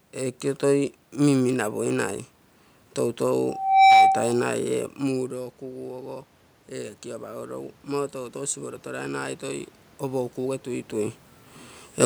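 From 6.69 to 11.21 s, automatic gain rising lifts the level by about 6 dB after the input dropped about 13 dB; room noise swells with the speech, unlike a talker simply moving.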